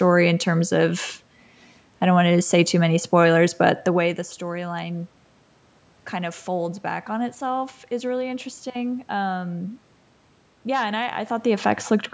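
Nothing stood out on listening to the speech; the level shifts around 4 s and again near 11 s sound like the talker moving relative to the microphone, and the room noise belongs to the recording space.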